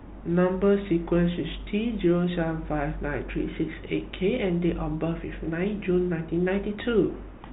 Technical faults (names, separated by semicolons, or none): none